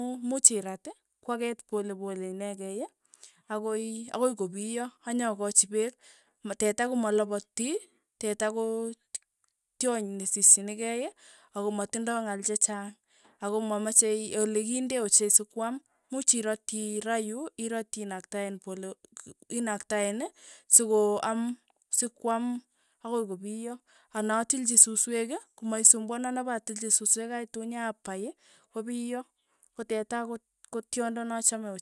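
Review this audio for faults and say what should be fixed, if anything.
Nothing needs to be fixed, as the audio has no faults.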